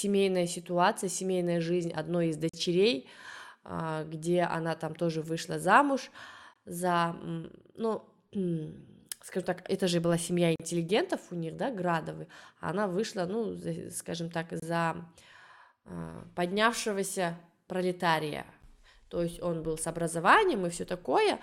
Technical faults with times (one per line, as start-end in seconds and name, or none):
2.49-2.54 gap between stream segments
6.53-6.56 gap between stream segments
10.56-10.60 gap between stream segments
14.60-14.62 gap between stream segments
18.62 gap between stream segments